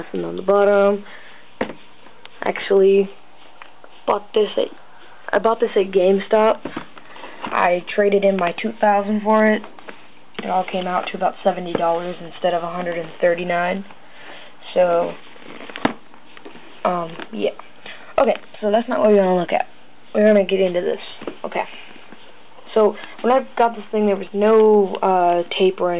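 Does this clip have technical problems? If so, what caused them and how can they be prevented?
No, nothing stood out as a technical problem on listening, so there is nothing here that needs preventing.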